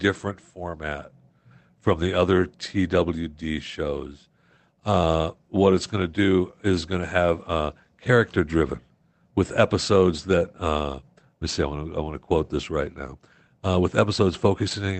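No technical faults turn up anywhere in the speech, which reaches the listener through a call codec and jitter buffer working as intended, with the top end limited to around 8 kHz, as that codec path normally does.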